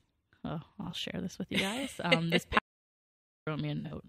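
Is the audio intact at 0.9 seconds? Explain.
No. Between 0.84 and 0.99 s the stream suffers AAC frame loss with concealment. About 64 ms of coded audio went missing in short gaps, the longest around 20 ms, spread over about 170 ms, which fits three lost frames. The decoder covers each gap by reusing the last good spectrum with altered phase or estimated energy. Because the gaps are brief, the speech doesn't fade out. Instead it turns smeared, noisy or phasey through that stretch.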